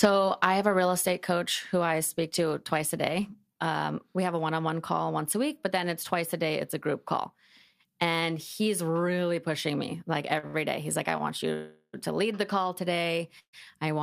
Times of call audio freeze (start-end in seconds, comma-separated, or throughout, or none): 11.53-11.95, 13.39-13.55